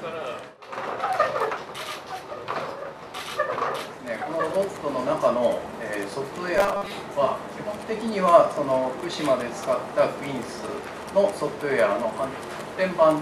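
From 6.57 to 6.91 s, robotic sound from repeated short buffers: a rigid 200 Hz buzz, likely from 5 ms chunks repeated over most of the span, unlike a smooth pitch shift.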